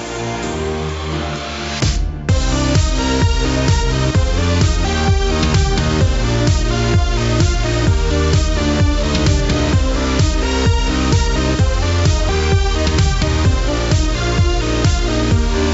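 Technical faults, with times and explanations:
No technical faults can be heard anywhere in the recording.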